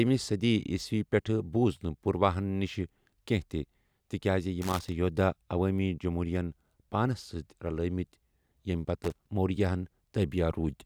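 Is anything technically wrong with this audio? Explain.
Yes, there's loose connector crackle in two spots. The first runs from about 4.62 to 4.92 s, right after "تہِ تِکیازِ", and the second from 9.03 to 9.29 s. Both are short, irregular bursts of scratchy crackle over the speech. That's a worn or dirty contact making and breaking as something shifts, so the signal gets chopped on and off, and any DC sitting on the line turns each break into a pop.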